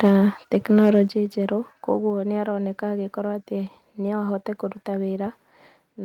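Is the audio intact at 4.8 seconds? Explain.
Yes, at 4.8 seconds the audio is intact, with no dropout, click, distortion or other fault to be heard at that moment.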